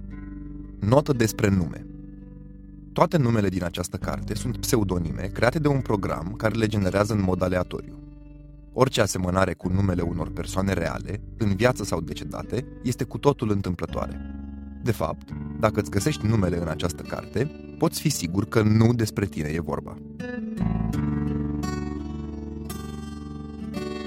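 From start to finish the level pulses with an overlap-add ripple, a rapid flutter of about 6 dB at around twenty times a second. The audio was split into windowed frames and rejoined with an overlap whose windows do not add up to a steady gain, so each frame boundary leaves a dip or bump in level. At this rate the modulation is too fast to hear as separate pulses and instead gives the whole sound a rough tremolo.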